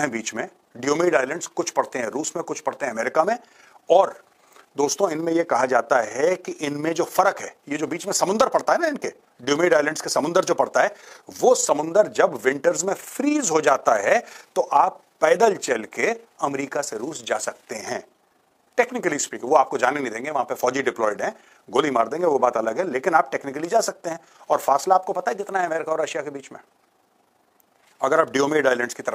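Throughout, overlap-add ripple: windowed frames were rejoined with gains that don't sum evenly, so level dips about 6 dB around 30 times a second, a rough flutter.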